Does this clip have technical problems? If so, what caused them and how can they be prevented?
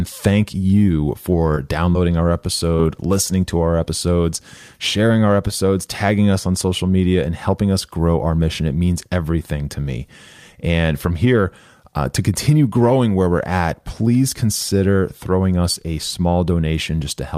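Yes. Between 0.79 and 3.88 s the speech carries brief ticks and small smears, about seven of them, none much longer than 20 ms. These scattered short gaps come from lost or late packets, each patched by extending the preceding sound. Prevent them with a steadier network path and a larger jitter buffer.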